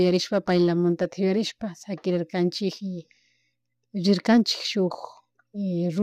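No technical faults can be heard anywhere in the recording.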